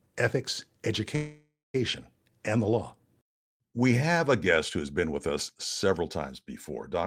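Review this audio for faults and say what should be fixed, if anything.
A call audio freeze runs from 1.15 to 1.76 s. The last sound is held as a fading buzz, ending in 190 ms of silence. Then the speech resumes exactly where it stopped, with nothing lost but now running 0.59 s late. The likely cause is delayed packets draining the jitter buffer. A steadier network path, or an adaptive jitter buffer with enough depth to ride out such delays, would prevent it.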